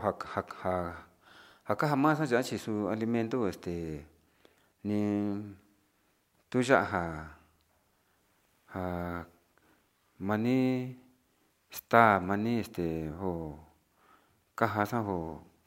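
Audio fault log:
Nothing stood out on listening to this speech recording; no line in the log is needed.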